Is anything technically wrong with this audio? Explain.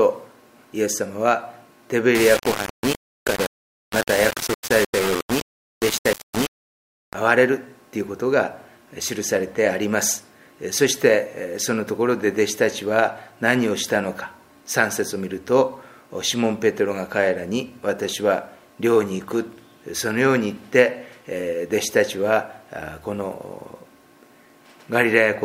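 Yes. From 2.15 to 7.14 s the sound turns grainy, distortion tracking it, likely low bit depth without dither, rounded to about 4 bits.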